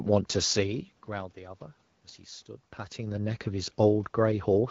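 No system faults are audible; the background room noise and the level shifts around half a second and two and a half seconds, as the talker moves relative to the microphone, belong to the recording itself.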